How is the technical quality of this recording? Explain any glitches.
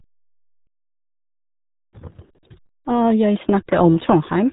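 The technical quality is poor: heavy RealAudio 14.4 codec damage runs through the whole speech recording. From start to finish, nothing above about 3.8 kHz survives, and the voice sounds muffled and gargly, which points to a very low rate near 8 kbit/s. This early dial-up codec crudely models the voice and discards detail. A simple telephone band-limit would sound dull but clean, whereas here the voice itself is smeared into a watery, bubbling texture.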